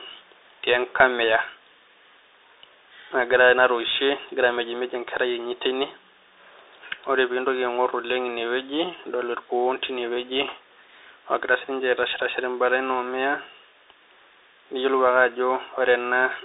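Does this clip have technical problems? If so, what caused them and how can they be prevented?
Yes. The Bluetooth CVSD headset codec affects the whole clip. Its narrowband link limits the band to roughly 300 Hz to 3.7 kHz, and its one-bit slope coding adds granular hiss and scratchy sibilants. On a spectrogram everything above 3.7 kHz is empty. Using a wideband headset link or a wired microphone prevents this.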